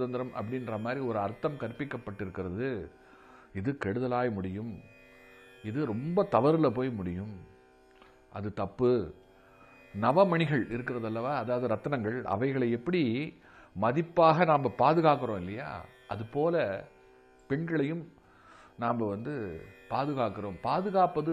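No technical faults can be heard anywhere in the audio. Nothing in the sound points to any break, glitch or damage along its path.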